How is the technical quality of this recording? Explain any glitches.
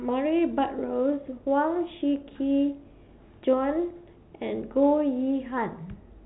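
No glitches can be heard in the speech; it carries the narrow band of G.711 telephone coding, with nothing above about 3.9 kHz, and any faint quantisation hiss tracks the level of the signal.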